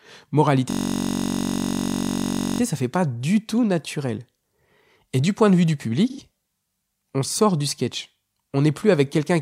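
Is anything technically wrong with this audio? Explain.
Yes. From 0.70 to 2.60 s a system hang loop occurs: the driver froze while the hardware kept replaying one 21.3 ms buffer, consistent with 1024 samples, producing a steady buzz at 46.9 Hz. At 6.10 to 6.20 s there is AAC frame loss with concealment: about 85 ms of frames, likely two, went missing, and the decoder patched them from the previous spectrum, leaving a brief smeared, noisy blur.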